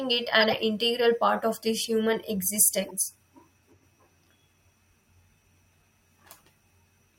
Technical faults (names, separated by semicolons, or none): corrupt frame decoded